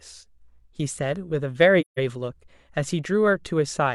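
At 1.81 s the speech drops into a silent gap that lasts until 2.0 s. This is AAC frame loss with muting. Compressed frames went missing, and the decoder filled their spectrum with zeros. The gap is about 170 ms, which fits roughly four lost frames. The overlapping transform windows soften both edges. The sound fades out, stays silent, then fades back in.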